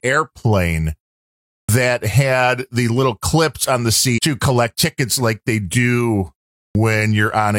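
At 1.61 s, after a pause of about 0.67 s, the speech comes back in with its front edge missing. That's a clipped start after a pause: the output device dozed off during the silence and took a moment to wake and lock again, so roughly 78 ms of the onset never made it out. The word just snaps in abruptly, without its first sounds.

Around 4.14 to 4.18 s there's a brief blip, about 48 ms long. That points to damaged data in a compressed stream. Data in that stretch was wrong, so the decoder couldn't read those frames properly and had to hunt for the next valid frame header. What you hear is a short glitch instead of clean audio.

At 6.68 s the clipped start after a pause happens again, this time after a shorter gap of about 0.39 s. Around 71 ms of the onset is swallowed while the device wakes back up, so the speech cuts in sharply from silence.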